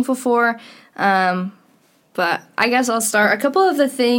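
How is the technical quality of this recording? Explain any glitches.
The technical quality of the recording is sound, with no glitches to explain.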